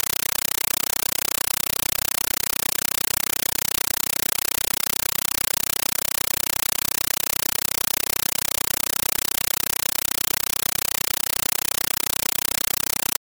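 Compressed stream played as audio runs throughout. 8 ms noise bursts repeat 31 times a second as loud chattering static, which fits an undecoded AC-3 stream.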